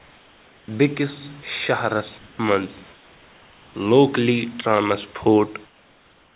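Comfort noise in place of the background occurs at 0 to 0.68 s, 2.18 to 2.39 s, 2.93 to 3.74 s and 5.66 to 6.35 s. In each pause the room's natural hiss gives way to a flat, featureless noise, about 1 to 4 dB quieter. This is likely discontinuous transmission: the sender stops sending audio during silence and the receiver substitutes synthetic noise, here within a band that ends at 4 kHz.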